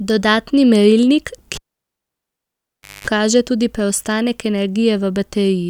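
At 1.55 s a live cable gets pulled and plugged in: a pop, about 1.47 s of near silence, a 0.22 s burst of 50 Hz buzz, then another pop at 3.07 s.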